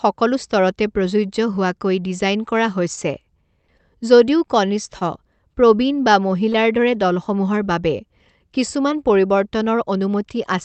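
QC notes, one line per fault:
3.67 s, 3.77 s and 4.99 s: short concealed packet loss. About 20 ms of audio goes missing each time and is bridged by extending the preceding sound, briefly smearing or wobbling it rather than dropping to silence. That distinguishes it from a dropout or edit click. The first bridge also stretches timing by about 10 ms.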